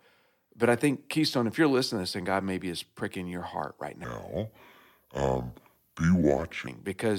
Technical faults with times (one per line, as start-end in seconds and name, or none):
4.04-6.67 section at the wrong speed